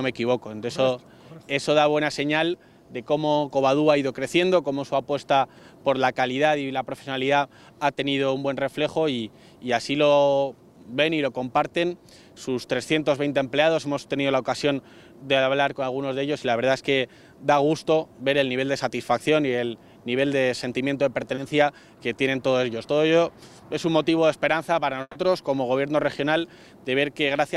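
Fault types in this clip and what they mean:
Short concealed packet loss: Around 21.35 to 21.39 s, about 20 ms of audio never arrived in time, so the receiver patched the hole by stretching out whatever it had just played and then blending back into the real signal. It's tiny, so what you get is a quick smear or slight wobble rather than an obvious dropout, and 20 ms of the original sound is simply gone, replaced by that guess.
Burst of packet loss: At about 25.01 to 25.17 s a longer run went missing, roughly 140 ms in all. The receiver kept extending the last bit of sound and fading it down as the gap dragged on, so you hear a held, thinning tail instead of new material, with about 40 ms going fully silent before things pick up again. When the audio resumes it has jumped ahead, and that 140 ms stretch is lost.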